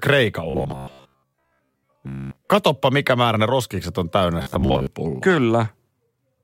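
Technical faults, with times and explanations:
0.50 to 2.48 s and 4.42 to 4.87 s, robotic sound from repeated short buffers: the speech turns into a rigid metallic buzz locked at 66.7 Hz that still roughly tracks the syllables. This is likely the playback repeating a 15 ms chunk while fresh audio arrives too slowly, with most of the real signal skipped. The fixed pitch set by the repeat length distinguishes it from a stutter or dropout, which leaves gaps or audible jumps.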